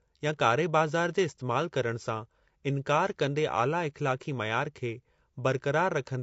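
Throughout, the speech carries plainly audible low-delay AAC compression damage, likely from an AAC-ELD encoder at a bitrate around 32 kbps. Its short frames resolve pitch harmonics poorly, so the speech sounds rough and grainy, with noise filling the gaps between harmonics.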